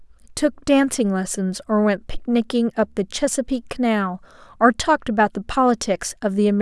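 Nothing stood out as a technical fault on listening to the speech.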